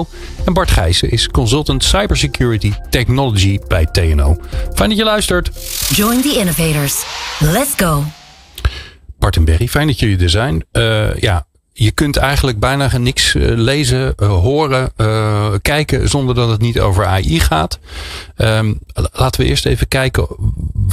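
No technical faults can be heard anywhere in the recording.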